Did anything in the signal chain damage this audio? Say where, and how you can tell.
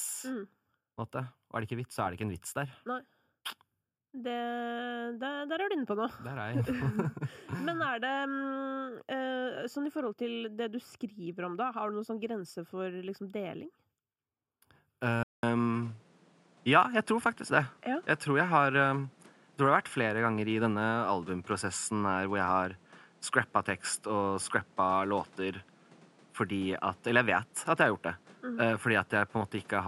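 Yes. At 15.23 s the speech cuts out for 200 ms, then returns duller, with nothing above 11.4 kHz. The level shifts by roughly 5 dB and a new noise floor appears. The likely cause is the input switched to a poorer device at the driver stage.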